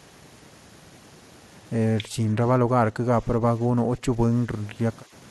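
The speech dips in chunks between 2.1 and 2.38 s, 2.6 and 3.43 s, 3.68 and 4.3 s, and 5.04 and 5.12 s, sometimes up to roughly 15 dB down. That's speech suppressed in double talk, likely an echo canceller turning the talker down while the far end spoke.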